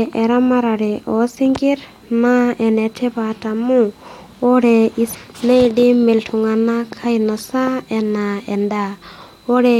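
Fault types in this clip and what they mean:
Damaged data in a compressed stream: Part of the encoded speech stream is corrupt, so the decoder loses sync and hunts for the next valid frame. A brief glitch sounds from 5.13 to 5.15 s, just before "neidim iltung'anak ainosa".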